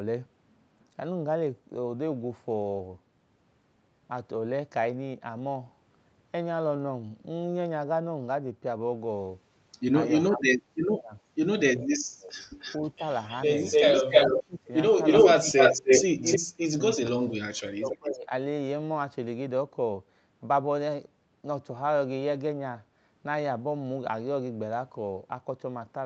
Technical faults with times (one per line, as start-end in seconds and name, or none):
10.27-11.14 speech suppressed in double talk
11.77-12.34 speech suppressed in double talk
12.59-14.44 echo leak
12.89-13.01 speech suppressed in double talk
14.07-14.70 speech suppressed in double talk
15.04-16.39 echo leak
15.38-18.32 speech suppressed in double talk
17.91-17.97 echo leak